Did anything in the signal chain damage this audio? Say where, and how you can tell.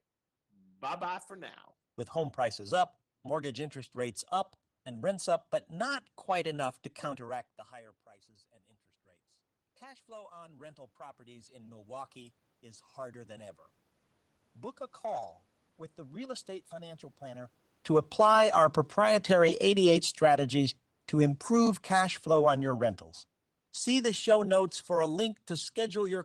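Yes. Automatic gain rising runs from 7.33 to 19.75 s, in the call-processing stage. Just after "not quite enough to", the talker moves away and the input drops by about 24 dB. The gain control responds by slowly raising its gain by about 12 dB over several seconds. You can tell it is processing, not the talker, because the room noise swells along with the voice. The rise recovers only part of the loss.

Automatic gain falling starts at 18.05 s and continues to the end of the clip. Around 17.5 s the talker moves again. With the boosted gain still in place, the input now reads as too loud or too noisy for it. The gain control then pulls its gain back down gradually. Voice and background sink together, which is the signature of gain riding in the call processing rather than a change at the source.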